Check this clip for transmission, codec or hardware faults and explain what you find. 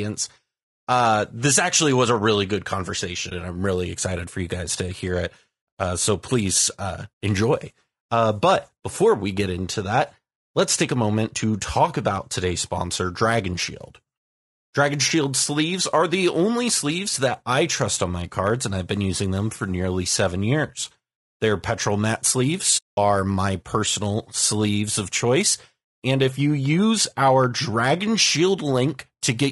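Two kinds of fault are present in this speech: a codec coloration that runs the whole way through, and two dropouts where audio frames went missing.

Throughout, the voice sounds rough and grainy, with noise filling the gaps between harmonics and a thin, synthetic top band. This is likely low-delay AAC compression (AAC-ELD), whose short frames resolve pitch poorly; the damage fits a low bitrate around 32 kbps. A spectrogram shows smeared harmonics and a patchy upper band.

AAC frame loss with muting occurs at 3.29 to 3.32 s and again, much longer, at 22.77 to 22.98 s (about 200 ms). The decoder zeroed the missing spectrum, so overlapping windows fade the sound out and back in. The first is heard as a brief dip and the second as a soft-edged hole. The waveform tapers into flat silence, and the spectrogram shows a blank vertical gap.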